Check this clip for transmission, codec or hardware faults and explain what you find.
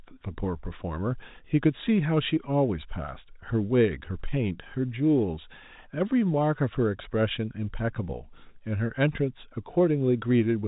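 Nothing wrong turns up here: the speech sits on an ordinary G.711 telephone channel, with nothing above about 3.8 kHz as that format allows, and there are no transmission, codec or hardware faults to point to.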